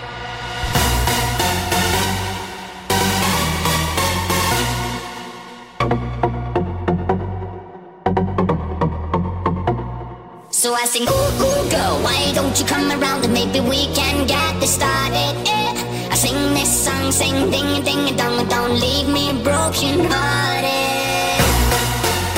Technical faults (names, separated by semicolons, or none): none